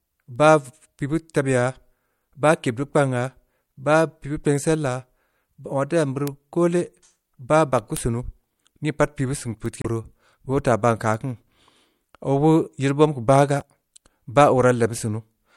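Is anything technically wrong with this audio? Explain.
Yes, there are two separate faults in this speech clip.

Word clock ticks run from 0.36 s to 15.32 s: some twenty sharp ticks, about one every second. The receiving device is clocked independently of the digital source, off by roughly 30 parts per million, so the two clocks slip past each other at a steady rate, and at each slip a single sample is dropped or repeated. The metronome-like regularity across the whole clip separates this from random clicks or dropouts.

Damaged data in a compressed stream appears twice, from 9.81 s to 9.86 s and from 13.59 s to 13.63 s. At each point corrupted bytes in the encoded stream make the decoder misread frames and lose sync until it finds the next valid header, which produces a short chirp or blip about 40 to 50 ms long. Unlike the clock ticks, these two events are isolated, irregularly placed and longer.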